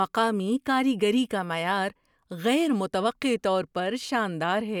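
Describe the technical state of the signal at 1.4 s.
At 1.4 s the signal is intact, with no audible dropout, distortion, clipping or other fault at that point.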